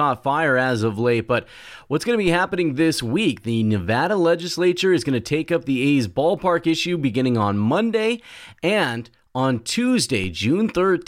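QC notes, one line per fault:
2.28 s and 10.24 s, DC step: between "but what's going to" and "happening this week", and again near the end, the waveform's zero line jumps by about -24 dBFS and then slides back as a 5 Hz high-pass bleeds the offset away. Each jump is heard as a short low thump under unchanged speech. On the waveform, the trace visibly shifts off centre and relaxes back. On a spectrogram, a brief broadband smear flares at the lowest frequencies.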